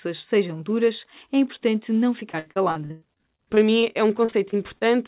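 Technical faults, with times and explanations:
2.2–4.83 s, repeated packet loss (robotic sound): after "duras é importante não", audio keeps arriving late or not at all, leaving 18 gaps of up to 97 ms. Each is filled by stretching the preceding sound, so the speech turns choppy, with pieces missing.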